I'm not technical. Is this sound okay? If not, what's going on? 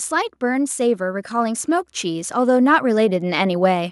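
No. From about 0.09 seconds right through to the end at 3.92 seconds, the whole recording slowly gets louder: the voice and the background hiss or room sound swell up together, as if someone were gently turning up a volume knob. This is automatic gain rising. The recording device decided the incoming sound was too quiet and kept raising its own volume bit by bit, lifting everything it picked up, not just the speech.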